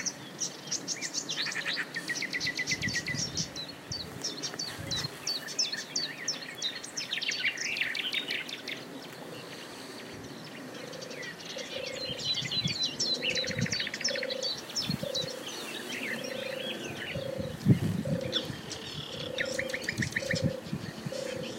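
Periodic clock jitter runs from 17.27 s to the end of the clip. Interference at around 2 kHz shakes the converter's sampling clock, putting sidebands about that far above and below every component of the sound. This gives a rough, metallic edge, strongest on high-frequency content.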